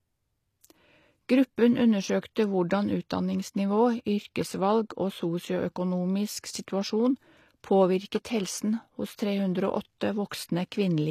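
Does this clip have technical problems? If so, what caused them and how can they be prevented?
Yes. All the way through this speech there's a hard ceiling, with nothing at all above about 14.9 kHz, along with the leftover artefacts of a heavily squeezed encode. That combination points to low-bitrate audio saved at a high bitrate. The file is a roomy MP3, but the damage was likely done earlier, by something like a 24 kbit/s HE-AAC pass. Re-encoding at 320 kbit/s just preserves those losses and can't bring back what was thrown away. To prevent it, go back to the original or a lossless source before encoding, and never upconvert a low-bitrate file.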